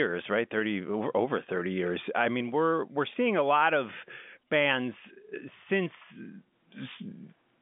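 No technical faults are audible in the speech; it carries the narrow band of a G.711 A-law telephone line at 64 kbps, roughly 200 Hz to 3.5 kHz with nothing above about 3.7 kHz, as expected of that coding.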